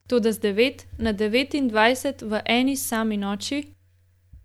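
No technical faults are audible anywhere in the speech.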